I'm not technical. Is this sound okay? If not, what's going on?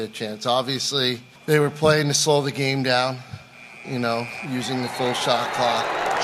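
No. From 0.62 to 5.77 s there's a click roughly every 0.74 s, about seven in all. That's clock drift buffer slips: two devices likely running at slightly different speeds. The evenly spaced ticking sets it apart from random crackle.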